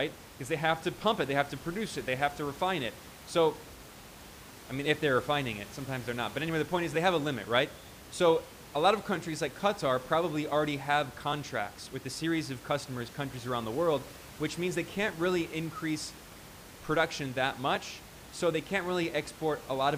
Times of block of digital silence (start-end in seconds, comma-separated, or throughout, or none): none